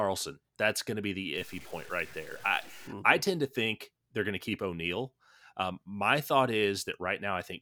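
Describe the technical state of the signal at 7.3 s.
At 7.3 s the speech signal is intact, with no audible fault at that moment.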